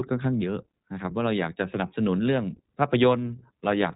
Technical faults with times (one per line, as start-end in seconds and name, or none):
0.00-3.96 iLBC codec